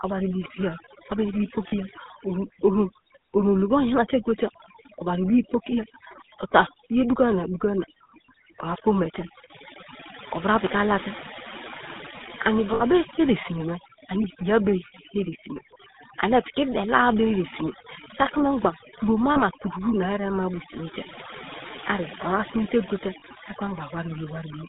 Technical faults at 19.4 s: overdone noise removal; GSM full-rate codec; lost GSM frames

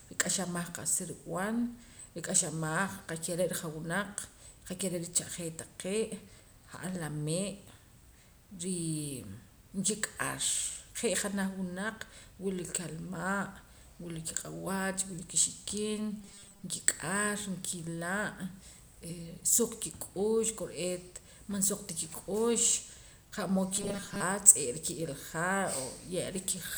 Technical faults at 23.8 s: robotic sound from repeated short buffers

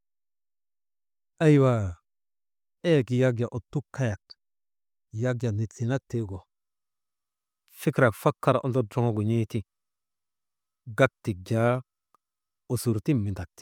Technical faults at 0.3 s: none

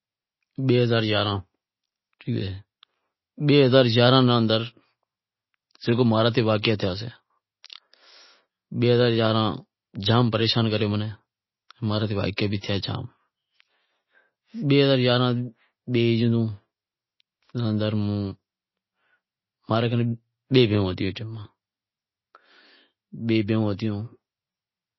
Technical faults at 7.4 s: MP3 compression

